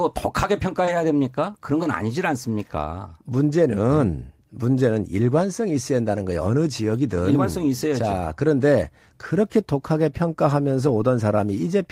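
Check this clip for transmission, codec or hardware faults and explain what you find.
Two transmission faults appear, both early in the speech.

Short concealed packet loss runs from 0.85 to 0.89 s. About 20 ms of audio missed the decoder. The receiver extended the preceding sound to cover the hole, then blended back into the real signal. It is heard as a brief smear or wobble.

A lost packet rebuilt from error correction occurs at 0.87 to 0.89 s and again at 1.83 to 1.85 s. Each time, one 20 ms packet was lost. The following packet carried a low-bitrate copy, and the decoder played that instead. There is no gap, but those moments sound rougher and noisier.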